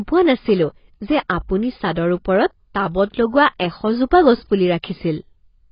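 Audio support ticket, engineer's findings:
Likely AAC compression at a very low bitrate, consistent with roughly 16 kbps AAC-LC, throughout the speech. Encoder starving the spectrum: nothing above 5.1 kHz, heavy codec damage. Result: dull, smeared speech, warbling sustained sounds, fizzy sibilants.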